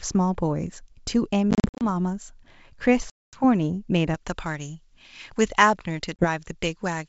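It's a speech clip on a wideband G.722 line, and it has packet loss on an ADPCM call in three places: 1.51 to 1.86 s (about 200 ms dropped in bursts up to 50 ms), 3.10 to 3.44 s (about 230 ms gone), and 6.17 to 6.27 s (about 30 ms). Each hole cuts to silence abruptly, and the decoder's predictor and step size lose track of the sender, so the speech comes back a bit distorted before settling. From 4.15 s to the end there's pre-emphasis left on: the treble is pushed up by about 11 dB at 10 kHz relative to 1 kHz, which fits a J.17 curve with no de-emphasis after it, so that stretch sounds thin, bright and hissy on the sibilants.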